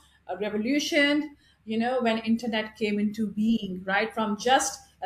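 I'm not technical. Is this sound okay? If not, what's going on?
Yes, this sound is okay, and there's nothing going on that needs fixing.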